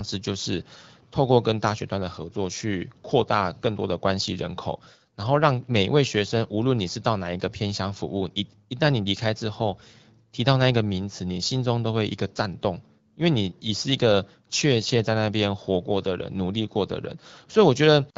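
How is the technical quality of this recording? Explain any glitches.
No glitches are audible in this speech recording, which carries the mild, slightly band-limited character of AMR wideband (HD Voice) coding at 12.65 kbit/s.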